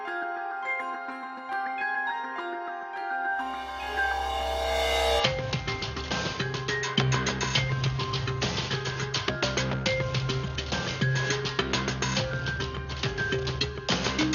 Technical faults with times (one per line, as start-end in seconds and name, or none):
5.20-14.35 input switched to a poorer device